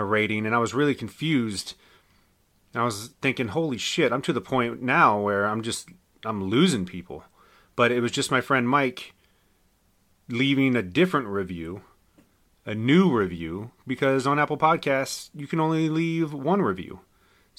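No technical faults are audible anywhere in the speech recording.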